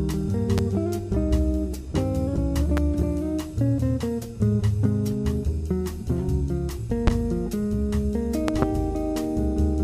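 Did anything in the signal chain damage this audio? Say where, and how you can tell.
Yes. Loud pops sit on top of the sound at 0.58, 2.77 and 7.07 s, with a double pop from 8.48 to 8.65 s. All stand well above the audio, which continues underneath. These are likely sudden voltage steps from the analogue wiring, such as a plug or switch.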